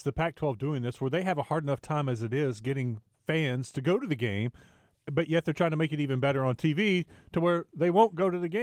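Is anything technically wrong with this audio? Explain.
No, nothing is technically wrong with this audio.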